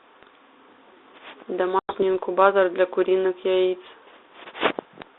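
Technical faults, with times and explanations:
1.79 to 2.03 s, packet loss on an ADPCM call: about 100 ms of audio, roughly ten packets, was lost and replaced by silence. The 32 kbit/s G.726 decoder's predictor and step size then disagree with the sender's, so after the hard-edged gap the speech returns misjudged and takes tens of milliseconds to settle.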